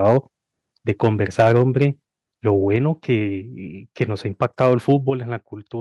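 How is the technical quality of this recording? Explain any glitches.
The recording is marred by repeated distortion and sudden level drops as the input gain fights loud peaks.

Microphone overload, at 0.05–0.18 s, 0.89–1.08 s, 1.39–1.86 s, 2.48–2.50 s and 4.41–4.94 s: the input gain was likely set too high, so peaks exceed the converter's ceiling by up to about 8 dB and their tops are sliced flat. The loudest syllables gain a harsh, crackling edge, worst at 1.39–1.86 s.

Microphone volume stepped down, at 1.41 s, 2.76 s and 5.1 s: the software likely reacted to the clipping by cutting the input gain in single jumps of about 2, 4 and 7 dB. Voice and background drop abruptly in level each time.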